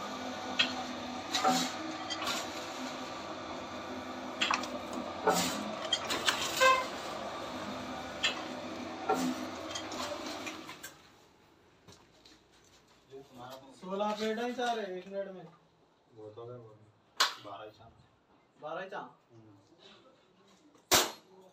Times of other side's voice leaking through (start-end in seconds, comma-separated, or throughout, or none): none